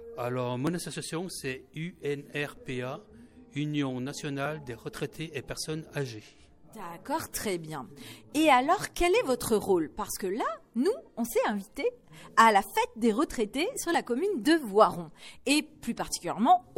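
From 0.67 s to 15.84 s, a click recurs every 1.9 s, roughly ten in all. This pattern is likely clock drift buffer slips: two clocks differing by around 500 ppm, so the buffer periodically drops or repeats a block of about fifty samples.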